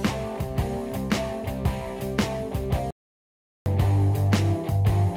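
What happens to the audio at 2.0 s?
Nothing goes wrong at 2.0 s; the audio plays through that moment intact, with no dropout, click, distortion or other fault.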